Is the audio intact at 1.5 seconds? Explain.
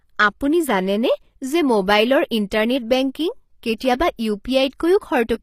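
No. At 1.5 seconds, as across the whole clip, the speech carries plainly audible damage, likely from HE-AAC compression at a low bitrate near 24 kbps. Only the lower spectrum is truly coded; the treble is copied up from below and roughly shaped, so s sounds turn gritty and lispy, and nothing remains above 15.5 kHz.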